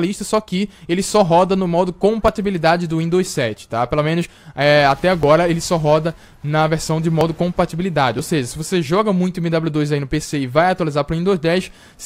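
At 2.28, 4.25, 5.23, 7.21 and 8.19 s a tiny click or skip marks an overlap between stream segments. Each falls on a boundary of the 1-second segments. There, two segments claimed the same time span, and the player cut the overlap from sound that was not really duplicated, so roughly 5 to 13 ms vanish. On the waveform the trace jumps abruptly mid-cycle, and the spectrogram shows a thin vertical broadband line at each spot.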